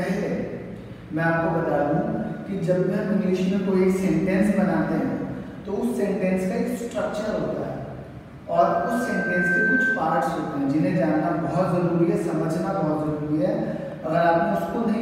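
A loudspeaker feedback squeal rises at 8.55 s. A 1.6 kHz tone swells over about a second, ending near 10.08 s, roughly 5 dB above the sound.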